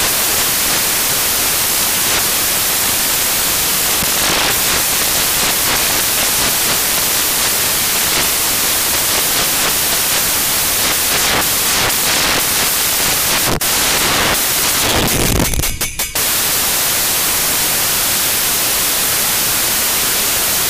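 From the first second to the last, the audio has samples built from the wrong bytes: misaligned byte order turns each value's noisy low bits into its loudest part, giving harsh broadband noise, close to white on loud sounds. Unlike added background hiss, nothing underneath survives intact.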